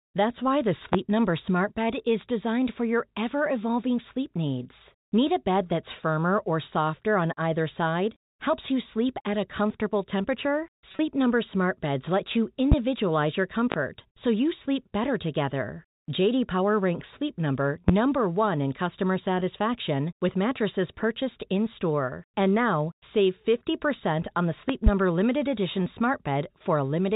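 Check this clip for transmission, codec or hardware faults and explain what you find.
Two faults stand out in this speech: a series of loud pops and one short burst of packet loss with pitch repetition.

Loud pops occur at 0.93 s (after "why the"), 12.72 s (after "let you"), 13.72 s and 17.88 s, and as a double pop from 24.69 to 24.9 s between "on the" and "limited edition". A sudden voltage step, likely from a plug, switch or static discharge, was added to the signal. Each one is a sharp thump roughly 20 dB above the speech, and the speech carries on underneath.

The packet loss with pitch repetition falls between 10.89 and 10.99 s. About 60 ms of audio went missing in short gaps spread over 100 ms, the longest 30 ms. The receiver filled each gap by repeating the last pitch cycle, so the speech there sounds briefly held and buzzy. The 4 kHz telephone band of the G.711 link can be heard throughout.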